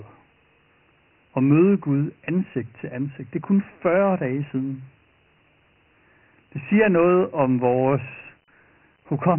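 Throughout the recording the speech has been coded as Dialogic VOX ADPCM, a 4-bit adaptive scheme whose 3 kHz ceiling fits a 6,000-sample, 24 kbps stream. Everything above 3 kHz is gone, leaving muffled, phone-like speech, and heavy quantisation adds a gritty hiss that trails each syllable.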